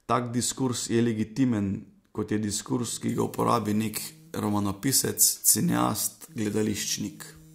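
From 3.08 s to the end, pre-emphasis is left on: the 75 µs FM treble boost goes uncorrected, lifting 10 kHz about 14 dB, so the speech turns thin, bright and sibilant.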